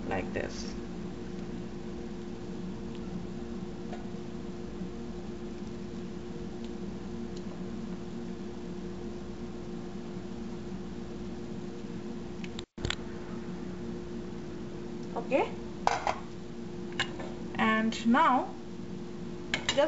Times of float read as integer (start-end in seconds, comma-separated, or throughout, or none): none